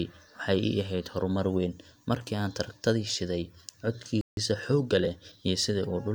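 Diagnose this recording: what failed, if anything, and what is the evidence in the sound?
The speech cuts out abruptly at 4.21 s and stays silent until 4.37 s, a gap of about 160 ms, before resuming. That is a playback stall at the playback stage: output halted in mid-flow rather than fading. The likely cause is the player's buffer running dry, or its audio thread being blocked, so nothing was delivered to the output until data flowed again.

From 4.37 s to 5.43 s the speech sounds hurried yet keeps its normal pitch. This is time-compressed catch-up, again in the playback stage. To absorb the backlog left by the stall, the player removed short slices of audio and cross-faded the joins, running about 1.15 times faster over that second. Pitch stays intact because no resampling is involved.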